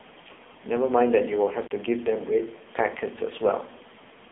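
The whole clip runs through an AMR narrowband mobile codec. With nothing above 3.8 kHz and heavy buzzy, synthetic speech, it sounds like AMR-NB at a low rate, around 5.9 kbps.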